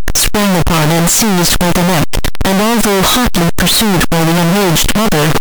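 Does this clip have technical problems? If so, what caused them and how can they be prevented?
Yes. Signed and unsigned mixed up, throughout the speech: the 8-bit samples were likely read with the wrong sign convention, flipping the top bit so every zero crossing leaps across the full range, giving loud, harsh distortion with quiet moments as loud as the rest. Prevent it by declaring and checking the sample format at every read and write.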